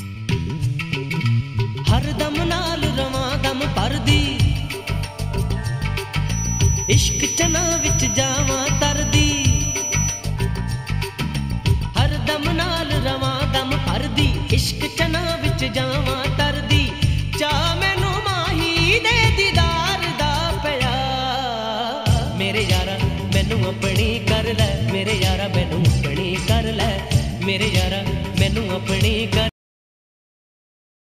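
From 6.23 to 10.26 s there's a feedback whistle, a thin, steady tone around 5.9 kHz sitting only a few dB under the sound and swelling and fading slowly. The likely cause is a speaker-to-mic loop hovering right at the edge of feedback without taking off.

Then at 29.49 s we get a cut-off end. The audio stops dead mid-sound and drops straight into digital silence with no decay at all, which is what you hear when the final buffers never got written or played out.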